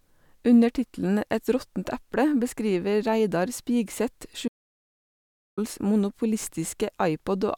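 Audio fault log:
4.48–5.57 s, audio dropout to silence: the speech cuts off into dead silence with no room tone for about 1.09 s, likely a lost input link.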